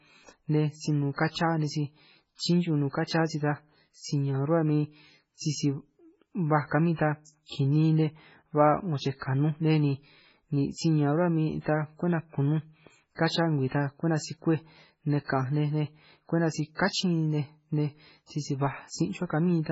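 Throughout, the speech sounds watery and swirly, with chirpy sibilants and nothing above about 7.6 kHz, likely from heavy MP3 compression at a very low bitrate.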